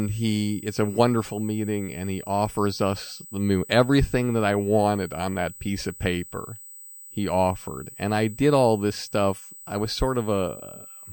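USB whine runs through the whole speech clip as a steady, fixed-pitch tone at 8 kHz, with its strongest component at 16 kHz, sitting about 20 dB below the speech. It comes from the USB bus drawing current in 125-microsecond microframes, which repeat 8,000 times a second and couple into the audio through shared power or ground. The result is a thin, high, unwavering whistle that doesn't follow the speech at all.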